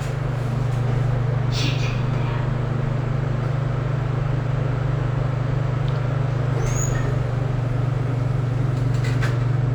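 Throughout the clip there is imaging from linear upsampling. The band rolls off softly toward 12 kHz, and a faint mirrored copy of the content sits between 12 and 24 kHz, roughly 40 dB below the sound itself. That fits a rate raised from 24 kHz to 44.1 kHz by simple straight-line interpolation, whose weak filtering leaves the image in place. It shows up as a light metallic shimmer on bright sounds. Unlike codec artefacts, it stays steady rather than swirling.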